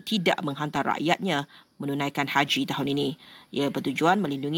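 From 0.76 s to 4.26 s the speech carries a regular series of clicks, about seven in all, arriving every 0.7 s with metronome-like steadiness. These are clock drift buffer slips. Two devices in the chain are likely running on separate clocks that disagree by something like 500 parts per million. The buffer between them creeps toward full or empty until a short run of roughly fifteen samples is dropped or repeated, leaving a discontinuity heard as a tick.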